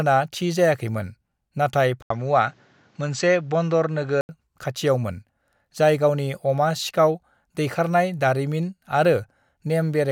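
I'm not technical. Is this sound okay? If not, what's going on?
No. From 2.02 to 4.29 s the speech turns duller, with a brief gap and faint new hiss, likely an input switched to a poorer device.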